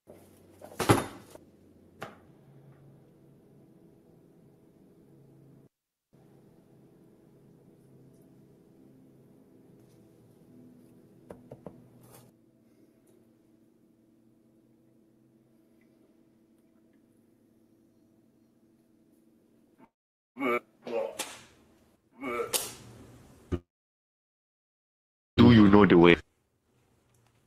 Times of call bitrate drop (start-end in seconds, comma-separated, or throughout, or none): none